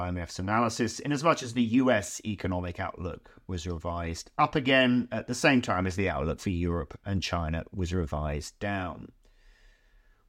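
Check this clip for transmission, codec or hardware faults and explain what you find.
Nothing stood out on listening to this speech recording.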